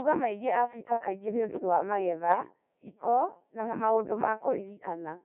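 Throughout, the speech passes through the Codec 2 vocoder. Only pitch, voicing, energy and a coarse spectral envelope survive, rebuilt from sine waves within roughly 150 Hz to 3.5 kHz. The heavy buzzy, robotic quality fits a 1.3 kbit/s mode.

From 2.29 to 2.38 s, between "kaingĩ nĩũdũ wa" and "hiko na maũndũ ma", bit errors on digital voice radio scramble the frame parameters. Pitch, level and timbre jump into a brief warbling bleep, consistent with about two frames corrupted at an error rate near 7 percent.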